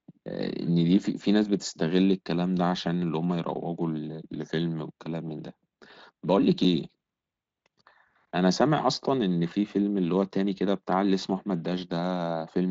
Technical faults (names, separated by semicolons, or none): dropped buffer (overrun)